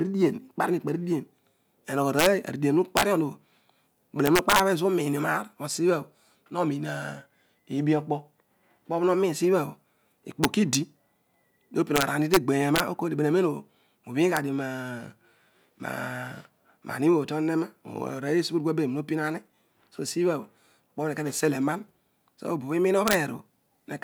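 Speech marred by integer overflow on its loudest peaks: the signal was driven about 0 to 4 dB past the integer ceiling and wrapped to the opposite extreme instead of being limited, giving harsh cracks at 2.19–2.26, 2.97–3.03, 4.26–4.60, 10.44–10.75, 11.96–12.37, 12.76–12.80, 14.37 and 23.08–23.15 s. On a waveform the peaks jump abruptly from full positive to full negative, and a spectrogram shows bright vertical broadband streaks at each crack.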